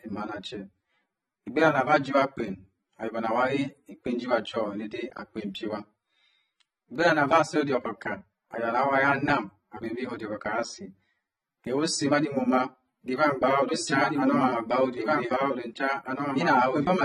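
Speech runs throughout with plainly audible AAC compression damage: the top end is dull and cut off, and sibilants and sustained sounds carry a fizzy, warbling smear. This most likely comes from AAC-LC at a low rate, consistent with about 24 kbps. Simple low-pass filtering would only remove highs. Here the coder starves each frame of bits, so holes and substitute noise move around the spectrum over time. From 13.69 s to the end, a doubled audio track appears. A full-band second copy of the speech, about 5 dB quieter, trails roughly two seconds behind and cuts in abruptly. It is likely caused by a second, slower capture path or misaligned copies in an edit. Unlike an echo or reverb, the copy has no decay, no repeats and no room colour, and its delay is far too long to sound like a space.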